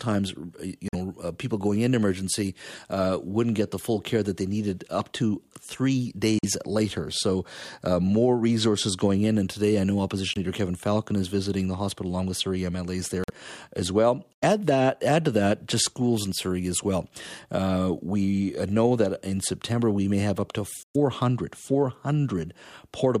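Speech drops to abrupt silence six times, a corrupt frame muted each time: at 0.88 s just before "know uh people going", 6.39 s, 10.31 s, 13.24 s, 14.33 s between "as well" and "that add to that", and 20.82 s after "may have up to". Holes run about 66 ms, stretching to 0.11 s and 0.15 s in the last two. Damaged compressed frames were rejected by the decoder and replaced with silence. Unlike a concealed packet loss, nothing smeared fills the gap, and unlike a skip, timing holds.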